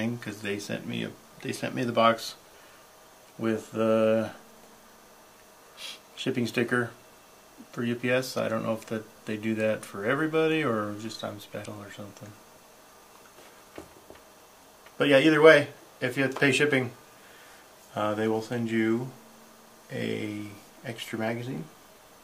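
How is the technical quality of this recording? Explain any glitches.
One glitch is audible, from 11.61 to 11.66 s: damaged data in the compressed stream. Corrupted bytes cause the decoder to misread frames, lose sync and hunt for the next valid frame header. The result is a short glitch lasting about 40 ms.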